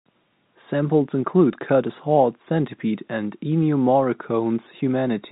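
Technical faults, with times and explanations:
No technical faults can be heard in this speech.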